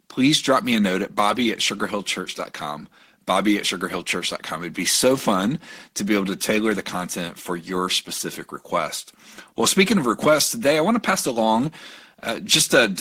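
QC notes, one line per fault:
No faults found in this clip.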